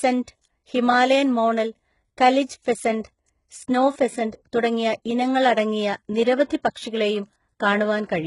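Throughout the speech the treble is synthetic and gritty, with nothing above 11.1 kHz, consistent with heavy HE-AAC compression at a very low bitrate, likely around 12 kbps. Pre-echo appears from 6.44 to 6.50 s and again at 6.74 s: quantisation noise spreads ahead of sharp attacks as brief hiss, softening their onsets.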